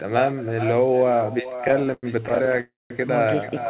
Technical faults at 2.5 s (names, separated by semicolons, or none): echo with no canceller; repeated stalls (stutter)